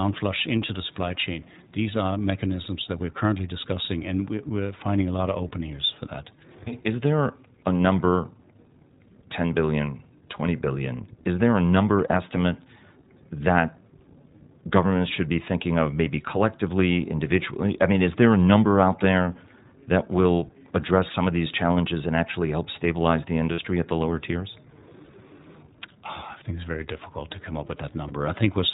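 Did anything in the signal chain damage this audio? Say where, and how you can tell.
Yes, at the codec stage. This is speech run through the iLBC codec, and the damage is plainly audible. Nothing survives above 4 kHz, and there's that slightly rough, synthetic edge throughout, which fits iLBC's 15.2 kbps mode with 20 ms frames.

On the network side you can hear lost iLBC frames at 2.64–2.67, 12.08–12.12, 23.52–23.60, 25.04–25.10 and 28.08–28.11 s. Each gap is a brief held, buzzy vowel where the decoder loops the last pitch cycle with noise. The gaps run 20, 20, 60, 40 and 20 ms, and each recovers immediately.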